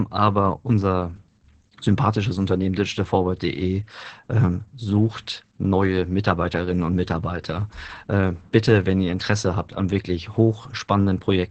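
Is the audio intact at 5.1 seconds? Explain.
No. At 5.1 seconds, as throughout the clip, the speech carries heavy Opus voice compression. The damage points to the SILK linear-prediction coder at a very low bitrate, around 10 kbps, in wideband mode. The band is cut off at 8.5 kHz, and the excitation is coded coarsely, so the speech sounds muffled, hoarse and slightly robotic. A spectrogram would show a flat ceiling at 8.5 kHz and smeared, blotchy harmonics below it.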